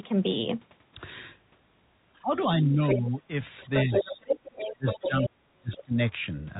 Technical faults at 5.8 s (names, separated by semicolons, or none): speech suppressed in double talk; other side's voice leaking through